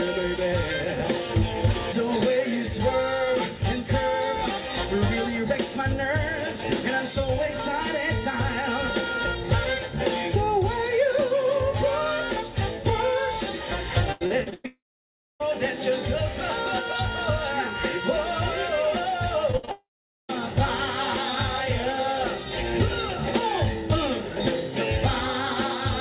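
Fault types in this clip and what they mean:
Repeated packet loss (robotic sound): Packets go missing again and again in a short run. Each hole is patched by extending the last sound before the next hole arrives. From 14.12 to 14.66 s there are five gaps, the longest 102 ms. About half that stretch is filled-in sound rather than real audio. It comes across as choppy and mechanical, with pieces missing. It leads straight into the first long dropout.
Long network dropout: The audio stops for much longer than a packet or two. The sound heard is a brief fading continuation of the last sound, then silence. From 14.66 to 15.42 s about 0.74 s is lost, with around 0.62 s of near silence. From 19.71 to 20.31 s about 0.58 s is lost, with roughly 0.45 s silent. The likely cause is a network interruption. The audio resumes later without the missing part.
Short concealed packet loss: A sliver of audio, about 20 ms, fails to arrive in time. 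The receiver smooths over it by extending the previous sound, then blends back in. It shows as a tiny smear or wobble, not a clear gap. Two occur, at 19.52 to 19.55 s and 19.65 to 19.69 s. They sit either side of a larger burst, just before the second dropout. The band-limited call sound, nothing above 4 kHz, stays the same around them.
Burst of packet loss: Several packets in a row are lost together, about 60 ms in total. The receiver holds the last sound and lets it fade across the hole. A voiced sound turns into a brief buzz, anything else into a dying hiss. Here it runs from 19.57 to 19.65 s. It falls between the two short losses. The cluster then runs straight into the long dropout at 19.71 s.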